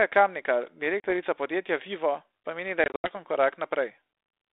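Speech over a G.726 ADPCM phone line, band-limited to roughly 250 Hz to 3.7 kHz, with light codec hiss that fits 32 kbit/s. Packet loss on an ADPCM call hits twice. At 1.0 to 1.11 s, about 40 ms drops out, a couple of packets. After "pa meni", 2.84 to 3.12 s loses about 140 ms in scattered gaps, the longest 80 ms. Each hole is hard-edged silence. The decoder's predictor is then out of step with the sender's, so the speech returns with brief distortion.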